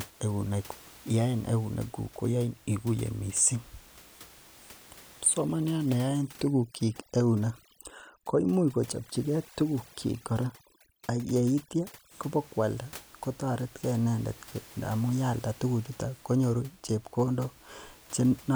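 From 5.38 to 12.11 s, overdone noise removal: an over-aggressive noise reducer mutes frequency bands near its noise estimate, leaving a lowered background that breaks up into twinkling specks.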